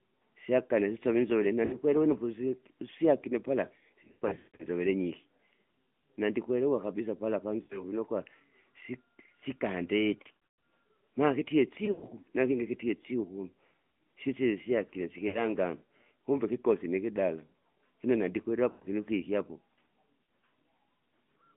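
Throughout, the speech carries the AMR narrowband mobile codec. The band runs only from about 150 Hz to 3.4 kHz, with nothing above 4 kHz, and the buzzy, synthetic texture points to a mid rate near 10.2 kbps. That texture sets it apart from a plain telephone band-limit, which thins the sound without adding a vocal-tract-model coloration.

Lost AMR speech frames then break in at 1.66 s, 4.04 to 4.69 s just after "usyakile pala", 7.62 s just after "nandikwelewa kabisa pala", 10.22 s, 11.86 s, 15.28 s just after "sisile syakile", 18.70 s and 20.24 s. Each time, failed frames forced the decoder to repeat the last pitch and vocal tract settings at falling gain. The short losses of 40 to 60 ms give a brief warble or dip. At 4.04 s about 400 ms is lost, scattered over 560 ms with runs up to 160 ms, so the sound smears and fades before returning rough. Unlike packet-loss gaps or clicks, these fill with a stretched, decaying imitation of the preceding sound rather than silence.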